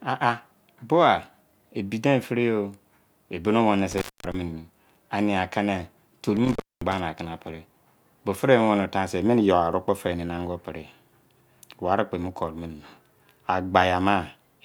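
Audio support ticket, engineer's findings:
Intermittent contact at 3.91–4.34 s and 6.37–7.00 s: speech drops for about 230 ms and 260 ms, crackle at edges, faint hiss. Loose cable or plug opening.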